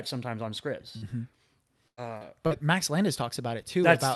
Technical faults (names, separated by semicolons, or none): short concealed packet loss; lost packet rebuilt from error correction; burst of packet loss